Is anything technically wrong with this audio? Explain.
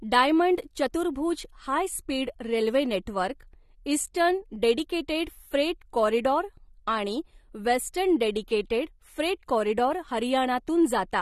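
Yes, the speech carries audible low-bitrate AAC compression throughout. Its dull, smeared, warbling texture is likely from AAC coding at a rate around 32 kbps. A spectrogram shows a hard ceiling near 12.6 kHz.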